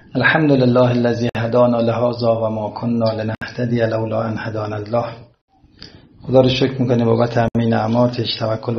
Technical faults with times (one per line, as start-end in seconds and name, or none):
1.29-1.35 gap at a join of encoded pieces
3.35-3.42 gap at a join of encoded pieces
5.42-5.48 gap at a join of encoded pieces
7.48-7.55 gap at a join of encoded pieces